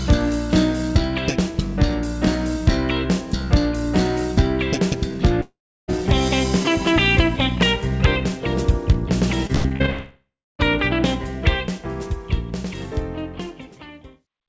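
A long network dropout, likely the cause, runs from 5.42 to 5.90 s. About 0.46 s of audio never arrives. The receiver stretches the last sound into a fading buzz, and that decays into roughly a third of a second of silence. The sound then resumes with that stretch missing.

Repeated packet loss (robotic sound) follows from 9.47 to 9.90 s. Six short holes open in quick succession, the longest 92 ms. Each is patched by repeating what came just before, so about half of this span is synthetic fill. The result is choppy, with fragments dropping out.

It runs straight into a second long network dropout, again likely the cause, from 9.90 to 10.61 s. Here 0.7 s is lost, and the concealment buzz fades into about 0.3 s of silence before the sound returns.

Throughout, nothing is heard above 8 kHz, which fits the wideband call codec in the path.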